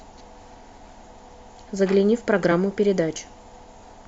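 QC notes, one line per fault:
1.01 s and 2.51 s, compressed frames skipped: the speech jumps forward by roughly 40 ms at the first point and roughly 20 ms at the second, which fits two and then one 20 ms frame going missing or being rejected by the decoder.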